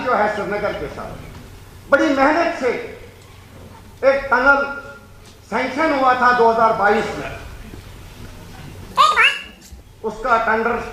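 From 8.91 to 9.81 s, a section plays at the wrong speed, twice as fast. Pitch jumps about ten semitones, likely from a clock mismatch during playback.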